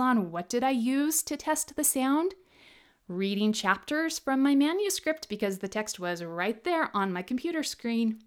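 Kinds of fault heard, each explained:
No technical faults can be heard anywhere in the speech recording.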